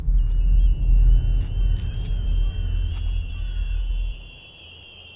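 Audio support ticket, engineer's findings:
Nothing stood out on listening, so there is no fault to log for this ticket.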